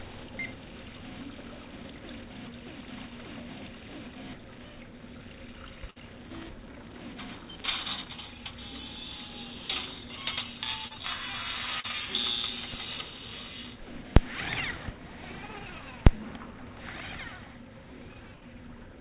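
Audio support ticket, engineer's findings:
Burst of packet loss, 5.90–5.98 s and 18.36–18.43 s. Jitter buffer/decoder starved of a run of packets; concealment held the last sound and faded it, either a held buzz or a fading hiss. About 57 ms and 55 ms of fill, about 60 ms of real audio skipped each time, so playback resumes slightly further on.

Short concealed packet loss, 10.88–10.92 s and 11.80–11.86 s. Packets late or dropped before the decoder; the gap was bridged by extending the preceding sound, then cross-faded back. Audible as a brief smear or wobble. About 27 ms of fill replacing 20 ms at the first, about 33 ms replacing 40 ms at the second.

Call path: band-limited at 4 kHz, consistent with a 64 kbps G.711 mu-law codec.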